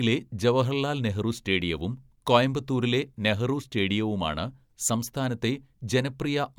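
No technical faults are audible anywhere in this speech recording.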